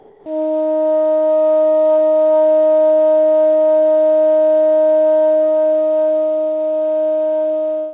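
From 0.00 to 0.26 s, the real background is replaced by comfort noise. It is steady and featureless, about 6 dB quieter, and lacks the original detail. The likely cause is discontinuous transmission, with the receiver synthesising noise until sound resumes. Nothing reaches above 4 kHz, which fits a narrowband call codec.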